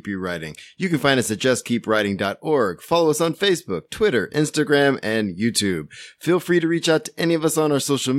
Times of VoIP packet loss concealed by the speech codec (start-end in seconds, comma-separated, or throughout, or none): none